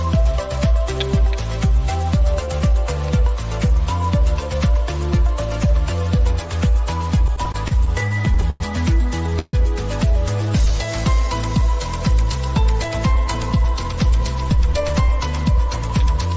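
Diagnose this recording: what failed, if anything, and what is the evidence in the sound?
Repeated stalls (stutter) in the network and jitter-buffer stage, from 7.28 to 8.62 s: thirteen short hold-ups, the longest 100 ms, together about 242 ms of filled time. Late packets kept emptying the buffer, and the receiver stretched the last sound each time, so nothing is lost but the passage drags. A spectrogram shows smeared, repeated frames.

A call audio freeze from 9.39 to 9.55 s: the sound hangs as a decaying continuation for about 137 ms, ending in roughly 10 ms of silence, then resumes where it stopped. The likely cause is packets held up in the network, draining the buffer and adding 137 ms of delay. The waveform shows a fading tail and a brief flat gap.

A jitter buffer slow-down in call processing, 10.46 to 10.87 s: the receiver repeated single pitch periods to rebuild its reserve, adding 36 ms and running at 93% speed at unchanged pitch. 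Sounds are drawn out. A spectrogram shows harmonics held steady but slightly stretched in time.

A jitter buffer speed-up from 12.88 to 16.33 s: with too much audio queued, the receiver cut short pitch-period pieces, removing about 150 ms and playing at 104% speed, pitch unchanged, through the G.722 path that leaves nothing above 8 kHz. The spectrogram looks subtly compressed in time, with events closer together.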